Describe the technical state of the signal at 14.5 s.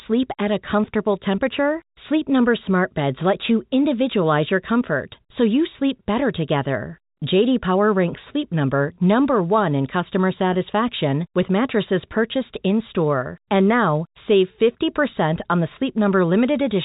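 At 14.5 s the signal is intact, carrying telephone-band G.711 coding with nothing above about 3.8 kHz and no fault present.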